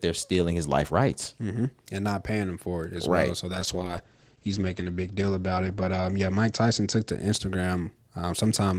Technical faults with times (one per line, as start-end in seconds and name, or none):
3.54-7.85 call bitrate drop